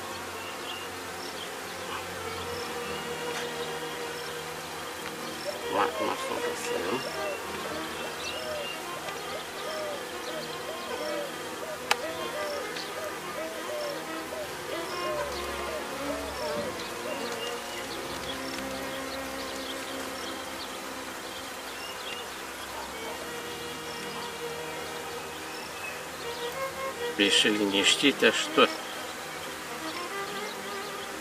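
Nothing stood out on listening; no audible technical problem appears anywhere in the recording.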